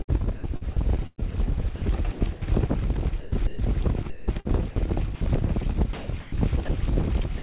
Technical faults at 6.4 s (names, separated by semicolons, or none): sound chopped by the voice detector